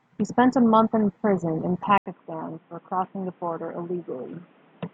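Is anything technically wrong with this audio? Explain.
Yes. Input switched to a poorer device, from 1.98 s to the end: after an 80 ms gap, the speech turns boxy, nothing above 3.8 kHz, somewhat quieter with new background hiss, likely a change of microphone.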